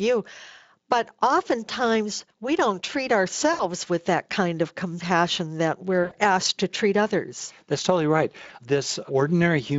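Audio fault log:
3.53–3.63 s, 6.03–6.14 s, 8.47–8.50 s: VoIP packet loss concealed by the speech codec. After "oftentimes we don't treat", "kind of compassion that" and "totally right", the decoder stretches the last sound into a fading buzzy tone or coloured noise to fill the gaps.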